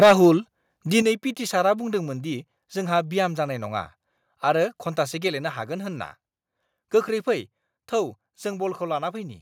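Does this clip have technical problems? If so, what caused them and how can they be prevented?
Yes. From 0.02 to 0.13 s there is microphone overload: the opening peaks run about 8 dB past full scale and roughly a fifth of the samples are flattened, giving a harsh crackle. The likely cause is excessive input gain at the converter. Setting the input level so peaks stay well below full scale prevents this.

The level also drops in two sudden steps, about 3 dB at 0.03 s and about 6 dB at 1.02 s, just before "पिटि सारआ". This is likely the microphone volume being stepped down by automatic gain control reacting to the clipping. Disabling automatic microphone adjustment and setting a fixed, moderate gain prevents it.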